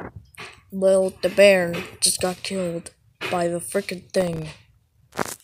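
Near the end of the audio, from about 4.17 to 4.62 s, there is processor overload crackle: the processor could not finish its very short audio buffers on time and missed a run of deadlines in a row. The gaps sound like buffers of roughly a millisecond and a half, with something like fifteen of them missed. Each miss drops out to silence with hard edges, and together these dropouts form a gritty, tearing crackle over the sound that stops once the load clears.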